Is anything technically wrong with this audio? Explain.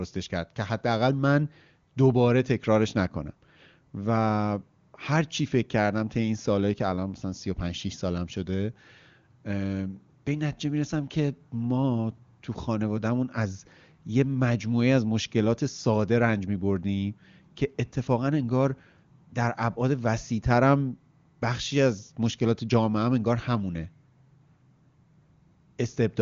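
No, the speech comes through the AMR wideband (HD Voice) codec with content that stops at about 7.3 kHz, and its sound fits the codec's top 23.85 kbit/s mode, with no audible problem.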